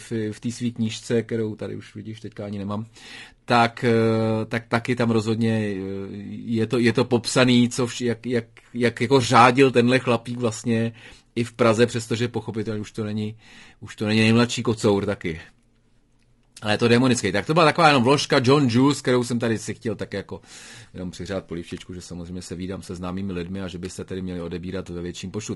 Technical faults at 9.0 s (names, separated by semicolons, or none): low-delay AAC compression